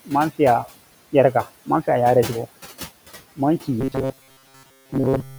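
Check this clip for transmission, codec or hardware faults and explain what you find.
Two faults are audible in the speech.

Noise suppressor artifacts run through the whole clip. The suppressor pulls down bands it judges to be steady noise by about 16 dB, frame by frame. The room noise, about 17 dB below the speech, dips in the gaps and swells under the speech.

Robotic sound from repeated short buffers appears from 3.81 s to 5.39 s. The speech becomes a rigid metallic buzz at 133 Hz that still loosely tracks its shape. The likely cause is audio arriving too slowly, so the software loops a segment of roughly 7.5 ms while skipping real audio. Most of that stretch is repeated material.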